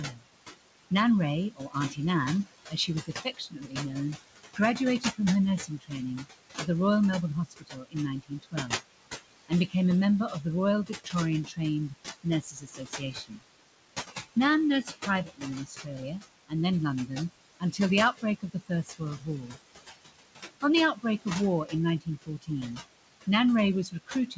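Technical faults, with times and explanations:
throughout: noise suppressor artifacts. The suppressor pulls the room noise, which sits about 10 dB below the speech, down by about 18 dB between phrases and lets it rise under them.
0.11–0.26 s, 1.56–13.43 s, 14.83–19.58 s, 20.62 s to the end: speech cut by the noise suppressor. Soft consonants and word endings are treated as noise and dropped about 18–21 dB, so they sound swallowed. This adds up to roughly 150 ms, 3 s and 1 s in the first three spans.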